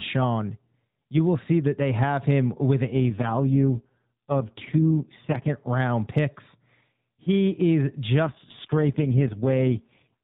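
From 2.90 to 5.50 s and again from 8.24 to 10.15 s, the speech turns buzzy and synthetic, which fits an AMR rate drop from 12.2 to 4.75 kbps. Unlike a dropout or band switch, there's no gap and the 4 kHz ceiling stays unchanged.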